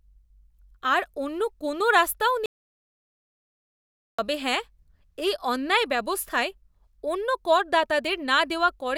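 At 2.46 s the speech cuts off abruptly and the signal drops to silence until 4.19 s, a gap of about 1.73 s. This is an audio dropout to silence: the gap holds no room tone or noise floor, and the speech resumes mid-flow when the signal returns. The likely cause is a momentary loss of the input, such as a disconnected device, a failed link or an accidental mute, while recording continued. Whatever was spoken during the gap is lost.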